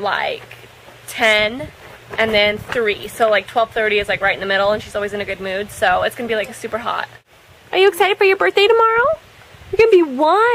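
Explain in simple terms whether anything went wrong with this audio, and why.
Hard clipping occurs twice, from 7.83 to 8.06 s and from 9.79 to 9.96 s. The loudest moments were slightly too big for the recording to hold, so their peaks were sliced flat, which adds a brief crackly edge to those loud spots.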